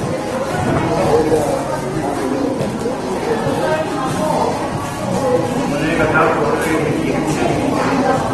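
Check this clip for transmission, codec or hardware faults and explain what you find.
Two faults are audible: lossy coding damage across the whole clip and a single digital tick near the start.

Opus compression, throughout: the audio was likely encoded with Opus in its CELT music mode at a low rate, which fits roughly 16 kbps. When the encoder runs short of bits, it fills bands with folded or noise-like content instead of leaving gaps. Here that leaves tonal parts sounding grainy and rough rather than swirly. The damage is plainly audible, and the band-limiting means nothing sounds above 12.2 kHz.

Bit error spike, at 0.55 s: a bit was flipped in a sample value, most likely on a digital link or in memory. The jump looks confined to about two consecutive samples before the signal snaps back. Because the value leaps by a power of two for only an instant, it comes through as one sharp, broadband tick that has nothing to do with the surrounding sound.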